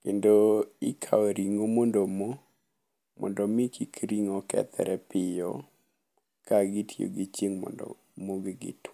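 Nothing goes wrong anywhere in this stretch of speech; there's no fault to point to at any moment.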